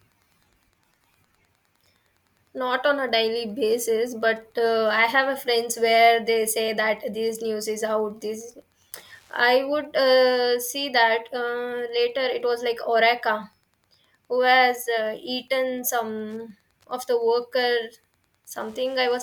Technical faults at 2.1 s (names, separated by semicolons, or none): Wi-Fi interference